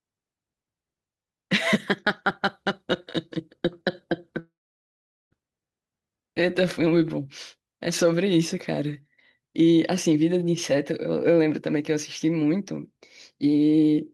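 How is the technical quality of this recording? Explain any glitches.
The recording has one glitch, a long network dropout. From 4.39 to 5.34 s, the sound smears into a brief fading buzz, then about 790 ms of near-silence, and resumes with roughly 920 ms of speech missing. The likely cause is a long stall in the incoming stream. Unlike a brief packet-loss click, the receiver's concealment runs out and decays into silence.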